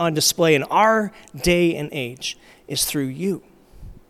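No faults detected anywhere in the speech recording.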